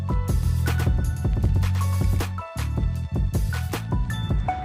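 From 0.43 to 2.21 s, a doubled audio track appears. A second full-band copy trails the sound by roughly a tenth of a second, some 5 dB quieter. It has no decay or room colour. It cuts in and out abruptly. A slower second capture path is the likely cause.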